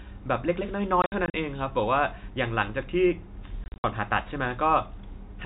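Packet loss filled with silence hits the speech twice. Between 1.02 and 1.34 s, and again between 3.64 and 3.84 s, packets failed to arrive and the receiver inserted digital silence, about 140 ms in total each time, in scattered gaps up to 60 ms long, which points to roughly 20 ms packets. The speech drops out in short holes with hard edges, heard through the narrow 4 kHz band of the G.711 telephone coding.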